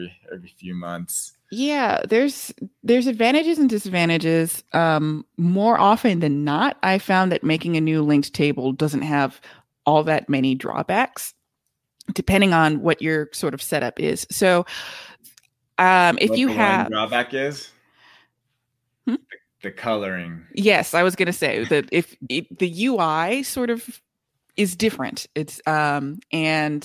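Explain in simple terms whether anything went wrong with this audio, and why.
Nothing went wrong: no audible faults anywhere in the recording, so there is nothing to fix.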